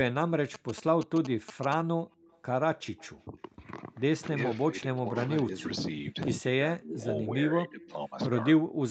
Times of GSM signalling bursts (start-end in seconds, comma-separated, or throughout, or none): 0.54-1.74